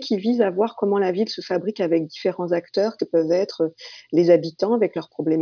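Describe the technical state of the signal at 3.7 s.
Nothing is wrong with the signal at 3.7 s; the audio is intact at that point.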